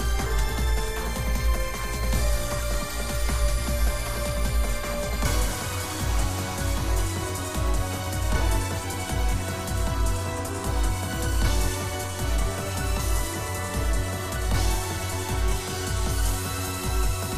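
Throughout the whole clip, the audio has likely passed through MP2 compression at a low bitrate, one that fits about 80 kbps. The MPEG Layer II coder divides the signal into 32 sub-bands and, short of bits, shuts the upper bands off while quantising the rest coarsely. The result is plainly audible: the sound is dulled and muffled at the top, and a gurgling, granular texture rides on it as bands flicker in and out.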